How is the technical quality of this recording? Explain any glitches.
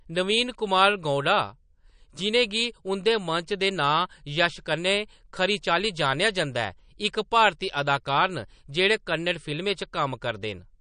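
The technical quality is limited by audible codec damage that runs through the whole clip, most likely from MP3 compression. Throughout, nothing is present above about 9.6 kHz, so the top of the spectrum sounds sliced off and sibilants lose their crispness. The bit budget is tight, which fits a low bitrate of around 40 kbps. The encoder discards high frequencies outright and drops weaker spectral components as they fall below its masking estimates. Because those components flicker in and out between frames, the speech takes on a watery, swirling texture, with chirpy artefacts on s sounds and softened consonant onsets.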